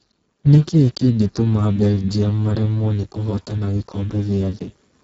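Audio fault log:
throughout: Speex codec. Heavy damage leaves the speech hoarse, noisy and near-robotic, as a bitrate around 6 kbps starves the excitation. Nothing is heard above 7.7 kHz.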